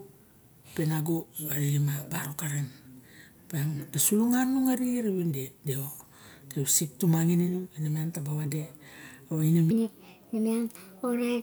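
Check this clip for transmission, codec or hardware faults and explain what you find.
One fault is present. Section at the wrong speed, 9.71 to 11.42 s: the closing stretch plays 1.36 times too fast, likely from a wrong playback clock, so speech turns hurried and about five semitones higher.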